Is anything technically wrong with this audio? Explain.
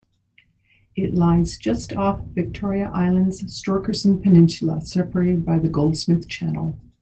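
Yes. From 2.13 to 2.19 s, just after "lies just", there is a lost packet rebuilt from error correction. About 40 ms of audio, which fits two 20 ms packets, was replayed from the low-bitrate backup copies carried in the following packets. It sounds briefly rougher and noisier but never drops out. That distinguishes it from packet loss concealment, which smears or repeats the preceding sound. The Opus call path itself, band-limited to 8 kHz, is not at fault.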